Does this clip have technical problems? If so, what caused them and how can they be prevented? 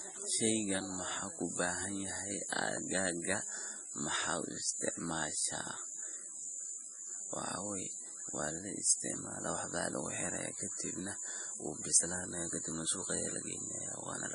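Yes. Throughout the speech there is heavy MP3 compression damage, likely from encoding at a very low bitrate (the sound fits roughly 32 kbps). Nothing is present above 10.5 kHz, so s sounds lose their sharpness and take on a swirly, watery quality as weak frequency lines drop in and out between frames. A spectrogram shows a flat ceiling at 10.5 kHz and speckled gaps below it. To prevent this, encode at a higher bitrate or keep an uncompressed master.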